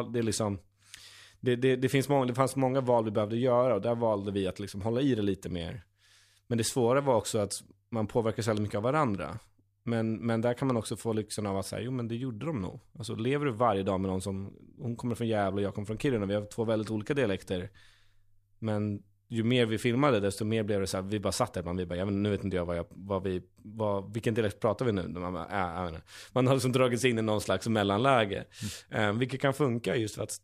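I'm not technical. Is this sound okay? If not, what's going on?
Yes, nothing in this recording points to a technical fault, so there's nothing here to fix.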